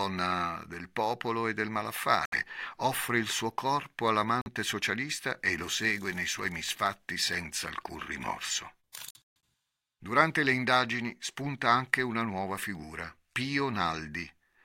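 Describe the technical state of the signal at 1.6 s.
The signal at 1.6 s is intact, with no fault audible at that point in the speech.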